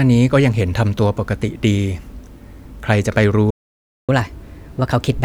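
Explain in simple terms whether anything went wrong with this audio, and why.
Something did go wrong, twice. At 3.50 seconds the speech suddenly cuts to silence for about 0.58 seconds, then resumes at 4.09 seconds. This is a playback stall. The sound stops in mid-flow rather than at a natural pause. The likely cause is that the player ran out of audio data or was briefly held up by other work on the device, so it had nothing to send to the speakers until it recovered.

From 4.09 seconds to the end, the speech sounds hurried and slightly higher, as if sped up. This is catch-up at higher speed. After the stall the player had fallen behind, so it plays its waiting backlog about 1.15 times faster to win back the lost time. Speeding up the audio this way also raises the pitch, here by about two semitones, which is why the voice sounds a little squeaky until the clip ends.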